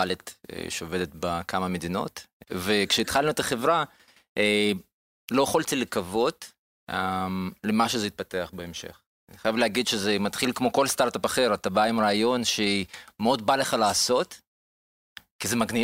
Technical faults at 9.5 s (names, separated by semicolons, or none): word clock ticks